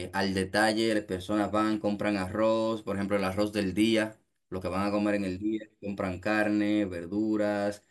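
Nothing in the speech stood out as a technical fault on listening.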